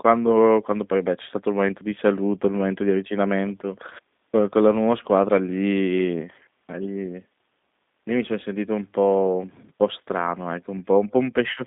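Throughout, the speech carries G.729 codec damage: band-limited to roughly 200 Hz–3.7 kHz, with a rough, synthetic edge consistent with 8 kbit/s pulse-coded reconstruction.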